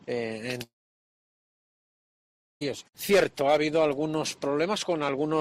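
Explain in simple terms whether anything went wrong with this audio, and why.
Something did go wrong. From 0.63 s to 2.63 s the audio cuts out for roughly 2 seconds. Right at the start, the last bit of sound is briefly stretched into a fading buzz or hiss, and then there is almost nothing but silence for about 1.9 s. When the sound returns, the missing stretch is simply gone, not delayed. This pattern is most likely a long network dropout: the data stopped arriving and the player had nothing real to fill the gap with.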